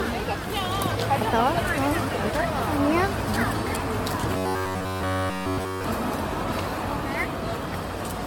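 Throughout, the audio sounds swirly, smeared and hollow, with blurred attacks and nothing above 17 kHz. This is likely generation loss from about seven passes through an AAC-type codec. On a spectrogram, it shows as a hard ceiling, patchy holes and speckled noise.

From 4.37 to 5.84 s, the sound collapses into a rigid metallic buzz at 93.8 Hz. This is robotic sound from repeated short buffers, likely caused by a roughly 10.7 ms chunk looping while the real audio is skipped. The waveform shows identical repeating cycles, and the spectrogram shows evenly spaced harmonic lines.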